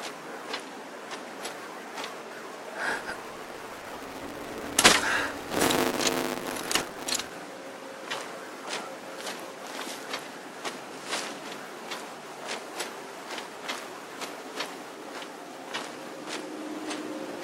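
From 2.90 s to 7.31 s a 200 Hz buzz rides on the sound: a filter restarted on every block, starting each 5 ms block from silence and leaving a small transient. Unlike steady mains hum, this buzz rises and falls with the signal's level.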